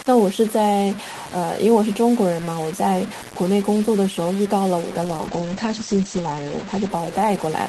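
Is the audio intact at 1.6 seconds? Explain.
No. At 1.6 seconds the speech has the grainy distortion of low bit depth without dither, present through the whole clip. It is likely caused by truncating to very few bits, which fits about 5. The rounding error follows the signal, about 15 dB below it. Quiet parts turn gritty.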